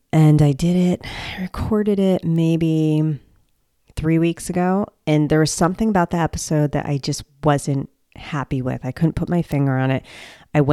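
Bit error spikes at 2.36 s, after "recorded it", and 9.52 s, after "I couldn't put my": one flipped bit jolts a single sample, giving a sharp broadband tick, the second louder.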